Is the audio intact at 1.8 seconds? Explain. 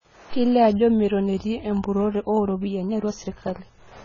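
No. At 1.8 seconds, as across the whole clip, the speech carries the marks of AAC compression, likely from heavy AAC-LC encoding at a bitrate that fits about 16 kbps. With so few bits per frame, the encoder discards fine spectral detail and lowers its bandwidth, leaving holes in the spectrum. The speech sounds dull and smeared, with a warbling, fizzy texture on sibilants and sustained sounds.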